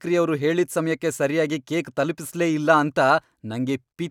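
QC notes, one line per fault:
No faults were heard on this speech clip.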